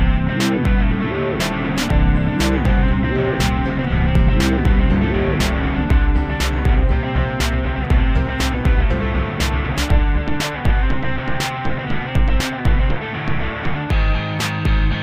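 Imaging from linear upsampling runs throughout: straight-line interpolation, which fits a 22 kHz to 44.1 kHz conversion, dulls the top and leaves faint mirror images between 11.03 and 22.05 kHz.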